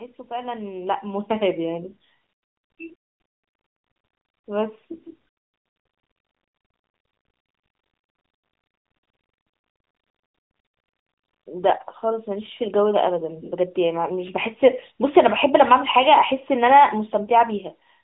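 Right around 2.86 to 2.93 s there's a quick burst of AMR bit errors, only about 70 ms long. The link got noisy enough that a few percent of the less protected bits in a handful of frames came through flipped, but the checksum on the important bits still passed, so the decoder played them anyway. The pitch and level hold roughly steady, but that stretch goes hoarse and gargly, standing out against the narrowband phone sound around it.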